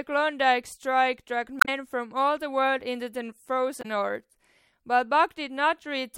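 Damaged data in a compressed stream breaks up this speech clip twice, from 1.58 to 1.69 s and again from 3.79 to 3.85 s, each a short chirp, squawk, click or hole. At those points the compressed bytes were corrupted, so the decoder misreads or rejects the affected frames, loses sync, and produces garbled output while it hunts for the next valid frame header before normal decoding resumes.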